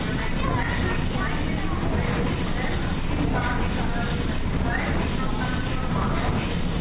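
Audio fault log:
No faults found; the audio has come over a WebRTC call path whose G.711 mu-law coding leaves nothing above 4 kHz.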